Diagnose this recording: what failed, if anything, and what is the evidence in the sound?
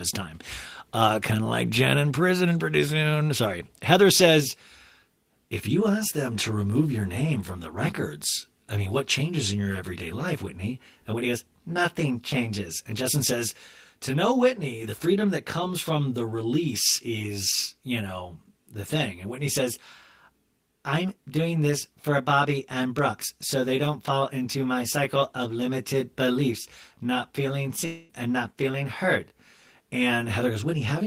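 From 4.39 s to the end, the speech turns rough and slightly doubled. It has fixed notches that start at around 30 Hz and repeat at even spacing up the spectrum. That is channel delay causing comb filtering. One channel arrives roughly 20 ms behind the other, and the two are then summed to mono. Content common to both cancels wherever the offset puts them out of phase. The stage is the driver or buffer path, where one channel slipped by a short buffer.

At 27.85 s the speech breaks off. A fading continuation of the last sound fills about 0.24 s. The speech resumes at 28.12 s, and the stretch that should have played in that gap is gone. There is no true silence, because the concealment covers the whole hole. This is a long network dropout. The likely cause is a run of lost packets that the receiver papered over by extending what it had already played.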